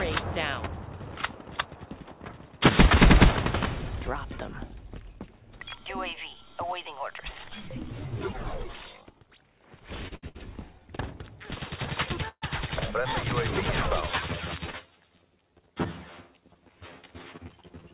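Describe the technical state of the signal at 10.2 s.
Packets arrived late and the jitter buffer ran dry three times in quick succession: short stalls from late packets at 10.08, 10.15 and 10.29 s, held for 32, 73 and 61 ms. Each time the last sound is stretched, then resumes where it stopped, giving a brief held, slightly buzzy smear over the 4 kHz band-limited call audio.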